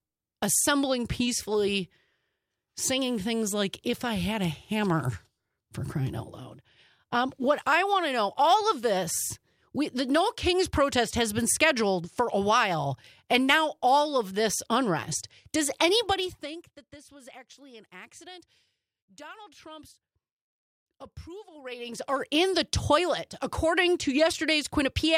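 At 16.03 s the level starts to fall, and zipper noise rides on it until 16.77 s. The drop happens in 2 dB steps with no smoothing, roughly fifteen steps a second. Each step leaves a small click, so the fade ticks instead of gliding. The sound ends up about 20 dB quieter. From 21.48 s to 22.22 s the level climbs back by about 20 dB the same way, with the same zipping.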